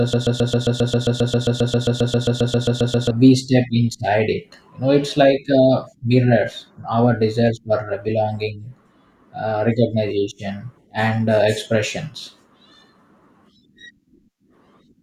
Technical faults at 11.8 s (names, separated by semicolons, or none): none